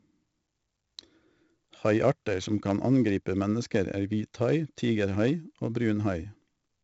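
Speech, damaged from start to finish by 4-bit ADPCM compression. Each sample is coded as a coarse 4-bit step from a predicted value. The quantisation error becomes a gritty hiss that rises and falls with the voice. The damage here is heavy. Sharp onsets smear and distort where the step size lags behind. Nothing is heard above 7.7 kHz. That dull top fits a 16 kHz sample rate, which matches the 64 kbps rate.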